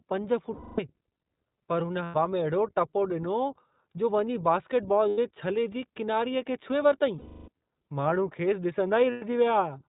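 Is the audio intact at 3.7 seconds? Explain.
No. At 3.7 seconds, as throughout the clip, the speech has passed through the iLBC codec, which fits its 15.2 kbps mode with 20 ms frames. Each frame's excitation is coded independently and nothing above 4 kHz survives, so the speech sounds muffled, plainly rough and synthetic.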